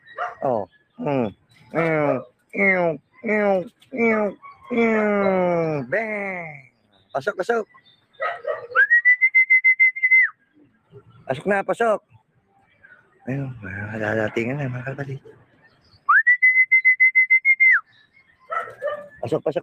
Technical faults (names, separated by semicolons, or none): noise suppressor applied to music or sounds; sound cut by the noise suppressor